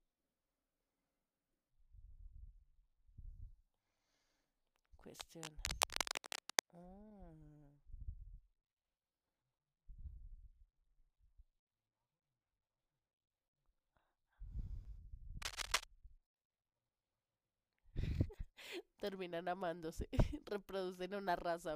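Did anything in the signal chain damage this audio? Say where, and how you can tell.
Yes, in the analogue wiring: the contact resistance of a worn cable or connector was likely changing as it moved. That produces cable scratch noise, dense and uneven crackling bursts laid over the speech from 5.15 to 6.60 s at roughly the same level as the speech, and again from 15.42 to 15.84 s, a little louder than the speech. The ragged, rustling texture is what identifies a flexing contact.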